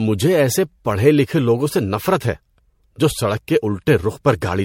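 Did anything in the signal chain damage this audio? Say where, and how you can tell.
Yes, at the codec stage: the speech sounds swirly, smeared and hollow throughout, with blurred consonant attacks, most likely generation loss from roughly four passes through a low-bitrate MP3 encoder near 64 kbit/s. A spectrogram shows nothing above 16.5 kHz.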